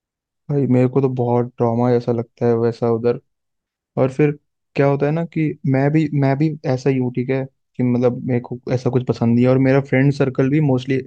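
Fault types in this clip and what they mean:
There are no fault types in this clip.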